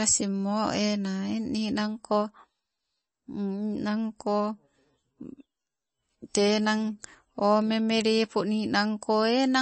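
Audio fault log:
throughout: MP3 compression, plainly audible; nothing above 8.3 kHz, and sparse bits leave weak spectral lines flickering, giving watery, swirly speech, likely from low-bitrate encoding.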